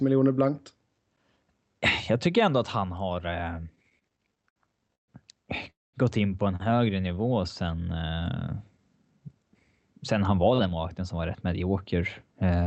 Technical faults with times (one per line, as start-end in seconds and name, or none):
3.75-5.10 repeated stalls (stutter)
5.70-5.95 call audio freeze
7.08-7.42 jitter buffer slow-down
10.16-12.03 jitter buffer speed-up